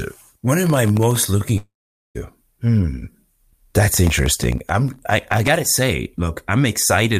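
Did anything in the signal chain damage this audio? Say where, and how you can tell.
Yes. Processor overload crackle sits at 0.64 to 1.16 s and again, longer, at 4.07 to 5.57 s. This is a driver or buffer stage problem. The speech is overlaid with gritty tearing made of many tiny silent holes with hard edges. Each hole is a very short buffer, well under a millisecond, that the processor failed to fill in time. About a couple of dozen are missed in the first burst and several dozen in the second. The crackle stops as soon as the load eases.

A long network dropout runs from 1.57 to 2.17 s. The speech stops and is replaced by a fading continuation of the last sound. That fades into roughly 0.45 s of silence before the audio resumes, with about 0.58 s of the original simply gone. This is concealment stretching the final received audio across the gap, and it is likely caused by packets failing to arrive over the network.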